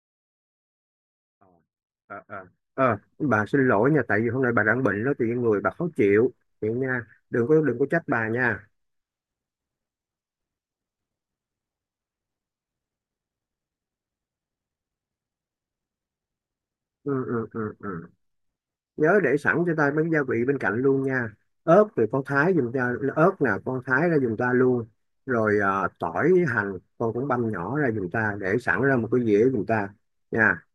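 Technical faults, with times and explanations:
No technical faults can be heard in the speech. The level rises in a smooth fade from the very start and reaches full level at about 2.95 s, with no click or hard edge.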